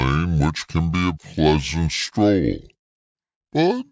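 Wrong sample rate runs from start to finish: the speech plays at about two thirds of its proper speed, with every pitch dropped by 7.02 semitones. Speed and pitch fall together because the samples are read out more slowly than they were captured, with no rate conversion. A 0.667 ratio fits audio recorded at 24 kHz and played back at 16 kHz. The voice comes across lower and more drawn out.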